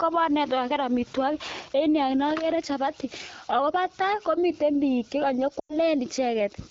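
At 5.59 s, lost AMR speech frames break the speech until 5.75 s. The decoder repeats the last good sound at falling gain, so it smears, then fades quickly, as wideband concealment does. The gap fits about 100 ms of dropped frames.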